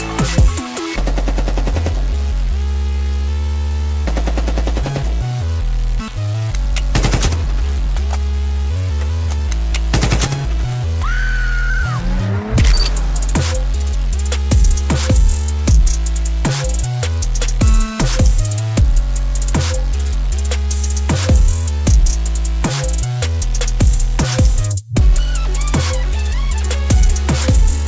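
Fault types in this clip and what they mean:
Skip ahead: at about 6.08 s playback jumps forward with no gap at all, so something like 0.7 s of sound is simply missing and the two sides are butted together. Unlike a dropout, nothing is muted or filled; material vanishes and the timeline shortens.
Jitter buffer speed-up: from about 6.19 s to 8.19 s the sound runs roughly 8% fast while keeping its pitch, as tiny pitch-period slices are trimmed repeatedly, shaving off around 150 ms in all. Unlike a skip, the time is lost gradually, not in one jump.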